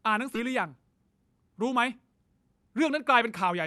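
Speech that has passed through a call codec with its upper band rolled off around 12 kHz, with a skip ahead at 0.35 to 0.37 s, where roughly 0.4 s of audio is dropped and the two sides butt together without a gap, likely from jitter-buffer overflow.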